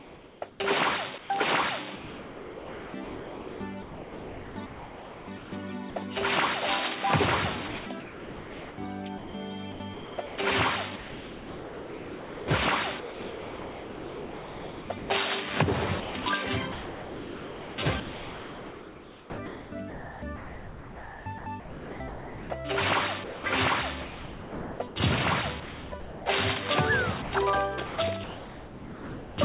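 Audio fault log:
0.00–5.96 s, 7.68–15.10 s, 16.00–26.26 s, 27.22–29.38 s: sound chopped by the voice detector. Quieter passages repeatedly drop out, totalling about 3.7, 5.1, 6.7 and 1.4 s per stretch. They are replaced by steady synthetic hiss, likely a voice detector switching transmission off and substituting comfort noise. On the waveform the sound cuts abruptly to flat low-level noise. On the spectrogram these show as featureless noise blocks, all capped at 4 kHz, as is everything else on the telephone-band call path.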